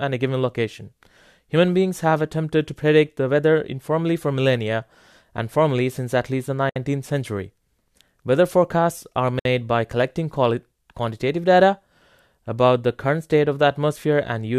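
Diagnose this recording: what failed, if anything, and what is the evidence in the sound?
Two brief dropouts cut into the speech, at 6.70 to 6.76 s (about 64 ms) and 9.39 to 9.45 s (about 59 ms), with softened edges before the sound resumes where it stopped. These are gaps at a join of encoded pieces: codec start-up delay and final-frame padding left untrimmed.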